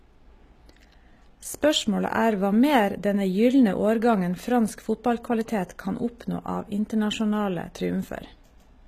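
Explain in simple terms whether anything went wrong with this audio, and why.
Yes. The speech was squeezed hard, likely by HE-AAC compression, which stores only the lower frequencies and fakes the treble by copying those upward. Throughout the clip the s sounds turn gritty and lispy, with nothing at all above about 15 kHz.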